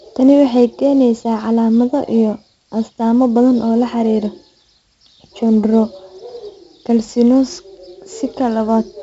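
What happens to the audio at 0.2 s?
At 0.2 s the speech carries 4-bit ADPCM compression, present throughout: coarse predicted steps leave gritty level-tracking hiss and smeared attacks, with nothing above 7.7 kHz, which fits roughly 64 kbps.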